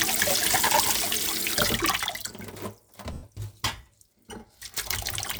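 At 2.05 s the whole sound, background included, abruptly drops by about 6 dB and stays there until 2.13 s, with no fade between levels. This sudden gain jump is likely a digital gain setting applied instantly from one sample to the next instead of being ramped.

From 3.13 to 3.23 s, about 100 ms of the audio turns into a hissy, smeared version of what came before and fades toward silence. These lost LE Audio frames, a gap that fits ten 10 ms LC3 frames, were filled by the decoder repeating the last spectrum with scrambled phase and tapering it away.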